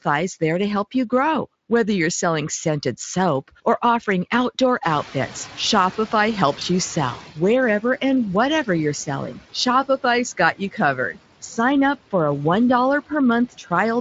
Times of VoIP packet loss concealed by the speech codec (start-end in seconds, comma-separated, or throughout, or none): 6.59-6.63